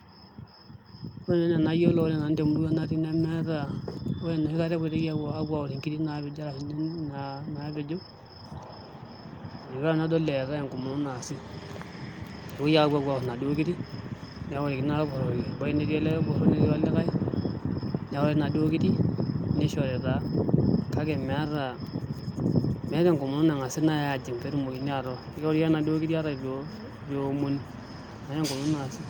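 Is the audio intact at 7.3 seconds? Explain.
Yes, at 7.3 seconds the speech runs through intact, with no dropout, click, distortion or other fault audible at that moment.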